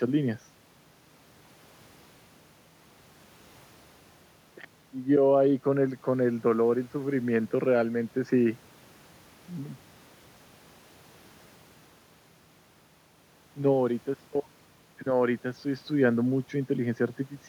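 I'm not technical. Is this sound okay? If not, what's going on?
Yes, no faults here.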